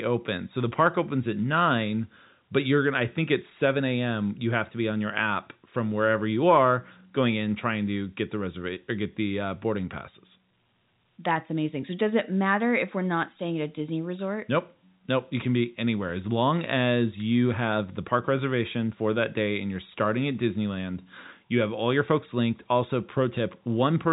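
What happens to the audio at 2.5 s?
Nothing goes wrong at 2.5 s: the speech continues intact through the narrow telephone band of the G.711 coding, with nothing passing above about 3.8 kHz.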